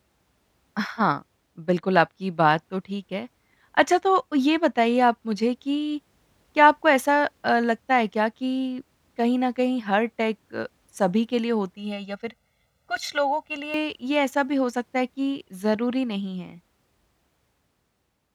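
From 11.76 to 13.74 s, the speech turns hollow and phasey. The cause is channel delay, giving comb filtering. One channel runs late by around 1.5 ms. When the two are summed to mono, the shared sound cancels at evenly spaced frequencies. The first notch sits near 300 Hz, and more follow higher up at regular steps. The coloration stays fixed until the fault ends.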